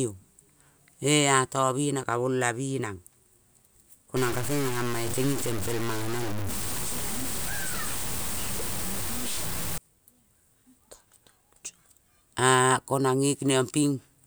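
From 4.17 to 9.78 s the speech turns harsh and grainy, with noise nearly as loud as the voice, likely low bit depth without dither, fitting truncation to 5 bits.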